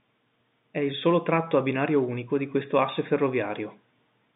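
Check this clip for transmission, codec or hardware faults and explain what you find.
Nothing stood out on listening to this speech, which comes across as ordinary telephone-band audio carried over G.711.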